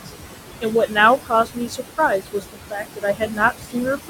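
A short speech clip with noise suppressor artifacts throughout. The room noise sits about 8 dB below the speech. The suppressor pulls it down by about 17 dB between words, and it rises again under them. The suppressor also cuts speech, mistaking quiet parts for noise. From 0.61 to 0.97 s, roughly 150 ms drops by up to about 15 dB. From 1.25 to 3.76 s, around a second in total drops by up to about 17 dB. Those parts sound swallowed and faint.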